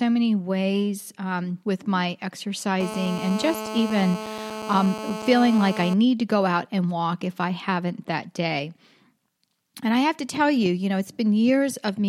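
From 2.80 s to 5.94 s, a GSM phone buzz sits over the speech. It ends just before "to go out and". A nearby 2G phone on a call was pulsing its radio at 216.7 Hz. The audio circuitry rectified those pulses into sound. The result is a hard, raspy buzz rich in harmonics, about 10 dB below the speech. It holds nearly steady, as a call does, and ignores the speech entirely.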